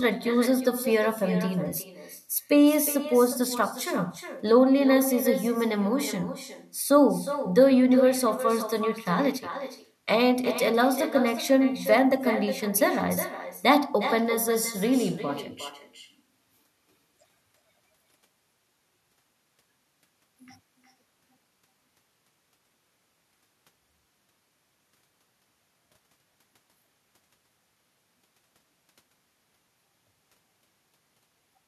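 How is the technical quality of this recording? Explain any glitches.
The recording has one fault, present across the whole speech clip. Echo with no canceller: a far-end loudspeaker feeds the microphone unsuppressed, returning every phrase about 400 ms later, about 12 dB down and thinner.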